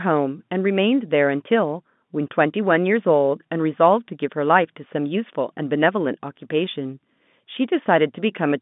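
No technical faults can be heard in this speech recording. It carries the sound of a G.711 telephone line, with the band running from about 150 Hz to 3.6 kHz, and its coding noise stays faint beneath the speech.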